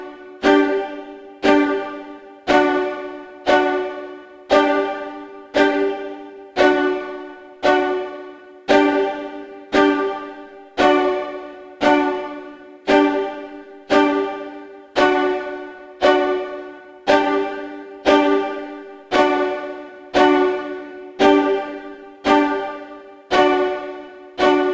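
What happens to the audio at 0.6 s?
Nothing goes wrong at 0.6 s; the audio plays through that moment intact, with no dropout, click, distortion or other fault.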